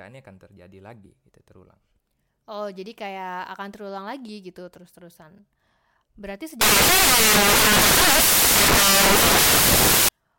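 From 6.61 s to 10.09 s the speech is swamped by loud, harsh broadband noise, the mark of samples built from the wrong bytes. The reader has misaligned or swapped the bytes within each sample, so the rapidly fluctuating low-order bits land in the most significant positions and dominate every value. Unlike clipping or a noisy channel, the hiss does not sit on top of the signal. It replaces it.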